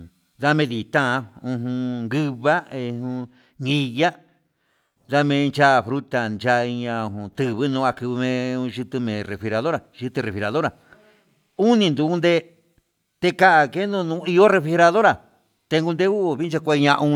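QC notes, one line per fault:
No faults heard.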